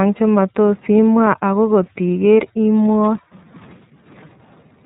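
Throughout the clip, the speech has passed through the iLBC codec, a narrowband VoIP coder whose sound fits its 30 ms frame mode at about 13.3 kbps. Each frame's excitation is coded on its own, without borrowing from the frame before, and nothing above 4 kHz survives. The result is a dull, telephone-like band with no sibilant sparkle, and a plainly audible rough, slightly synthetic grain running through the speech from start to finish.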